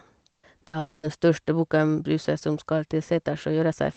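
A burst of packet loss hits this speech at 0.31 to 0.46 s and again at 0.67 to 0.76 s. Each time, a run of packets went missing and the receiver stretched the last sound it had into a held buzz or fading hiss, about 120 ms in the first gap, which then sinks into roughly 70 ms of near silence, and about 60 ms in the second, before the speech picks up further along with that stretch gone. From 0.79 to 1.06 s comes a longer break whose likely cause is a long network dropout. For about 240 ms the receiver keeps extending the last sound as a decaying fill with no true silence, and when speech returns, that whole span is missing. Underneath all of this, the call codec's coding noise and its cutoff near 8 kHz can be heard.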